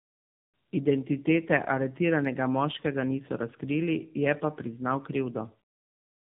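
The clip is speech with tandem speech coding throughout. It sounds rough, muffled and warbly, with nothing above about 3.7 kHz. That points to two narrowband AMR-style coders in a row. Each one re-encodes the previous one's already damaged output, so the artefacts compound.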